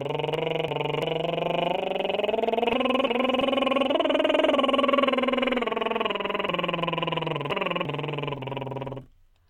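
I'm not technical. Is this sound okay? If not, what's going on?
No. The music has chunks out of order at 0.34 to 1.02 s, 2.73 to 3.41 s, and 6.49 to 7.85 s. Short pieces of music, about a third of a second each, play late. The passage sounds jumbled.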